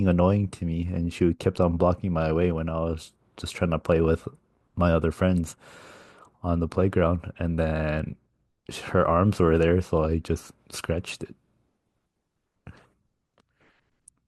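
Speech recording, no technical faults heard.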